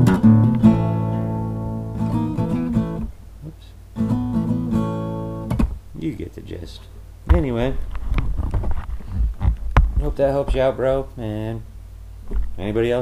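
No audible defects anywhere in the clip.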